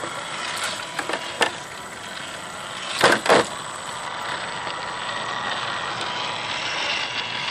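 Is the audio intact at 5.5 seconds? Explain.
No. At 5.5 s the sound has channel delay (comb filtering), from 4.07 s to the end at 7.50 s. One channel trails the other by a tiny offset, roughly two samples. Summed to mono, they cancel near 10 kHz, dulling the top end.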